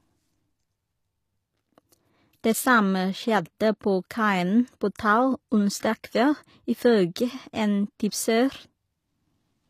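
HE-AAC compression is likely behind the damage heard throughout this speech. Only the lower spectrum sounds genuinely coded. The treble is rebuilt from copied lower bands, so s sounds come out gritty and lispy, which fits a low bitrate around 24 kbps. Nothing remains above 15 kHz.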